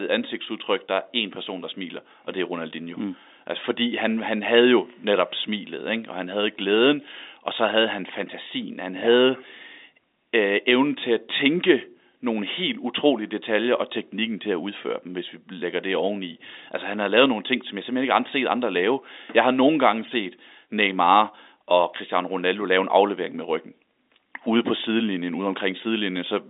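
Nothing goes wrong anywhere in this speech, which just has the narrow, boxy character of G.711 telephone coding, with the band sitting between roughly 250 Hz and 3.7 kHz as you'd expect from an ordinary phone line.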